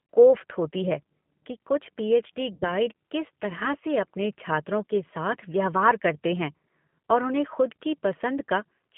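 From the start, the whole recording carries G.729 codec damage. The speech is rebuilt from a vocal tract filter, a pitch predictor and a few pulses per frame rather than from the waveform itself, so it sounds plainly rough and slightly synthetic, which fits an 8 kbit/s G.729A stream. The line passes only about 150 Hz to 3.4 kHz. A spectrogram shows a hard ceiling at 3.4 kHz, an empty region below 150 Hz, and smeared harmonics.

At 2.54 s, just after "कि कुछ पीएच डी", VoIP packet loss concealed by the speech codec begins and lasts until 2.67 s, just before "किस तरह से अपने". About 80 ms of audio, which fits eight lost 10 ms frames, was never received. The decoder filled the gap by repeating its last pitch and filter with falling gain, so the sound is stretched into a buzzy tone or coloured noise that fades away. The waveform shows a tapering patch, and the spectrogram shows a flat, repeated stretch that darkens before normal speech returns.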